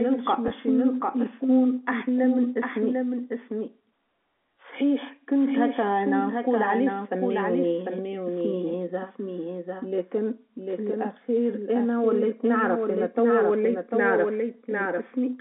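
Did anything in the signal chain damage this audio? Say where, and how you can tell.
Yes. A doubled audio track runs throughout: a full-band copy of the speech trails the original by roughly 0.7 s, about 5 dB quieter, with no decay or room colour. The likely cause is the same signal being captured twice, a second time through a slower path.

Packet loss with pitch repetition occurs at the network stage from 0.48 to 0.50 s, just after "مش نلقى". A brief held, buzzy note replaces about 20 ms of signal, which fits a single lost packet bridged by repeating the last pitch period.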